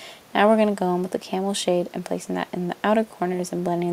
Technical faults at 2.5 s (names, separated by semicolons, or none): none